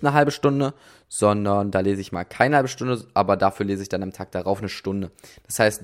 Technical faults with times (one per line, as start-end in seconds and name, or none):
none